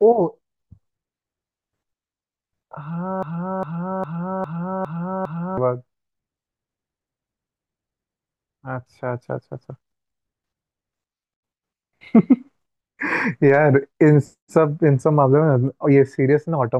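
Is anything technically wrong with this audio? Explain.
Yes. A broken-record loop runs from 3.23 to 5.58 s: a fragment of about 405 ms repeats exactly six times back to back. The player or stream likely stalled and kept resending its last buffered piece, so the speech meant for that stretch is lost.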